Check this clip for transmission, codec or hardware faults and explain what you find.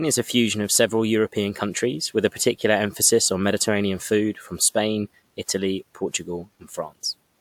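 Nothing turned up here: the speech comes through without any transmission, codec or hardware trouble worth pointing out.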